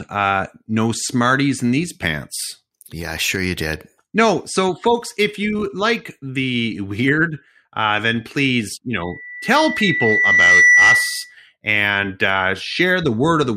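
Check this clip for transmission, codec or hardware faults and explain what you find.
One fault is present. A loudspeaker feedback squeal runs from 9.00 to 11.36 s, between "uh then please you" and "and uh". The microphone re-picks its own loudspeaker, and the loop gain exceeds one at 2 kHz. That tone swells over about a second and a half to roughly 10 dB above the speech. A spectrogram shows a bright horizontal line at 2 kHz, and the waveform's envelope balloons.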